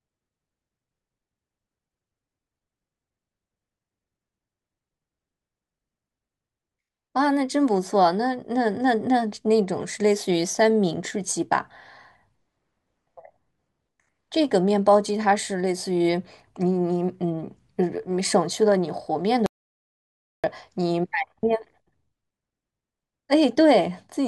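At 19.46 s the speech cuts off abruptly into dead digital silence, with no room tone at all, and returns mid-flow at 20.44 s, losing nearly a second. This audio dropout to silence likely comes from the input being lost while the recorder kept writing zeros.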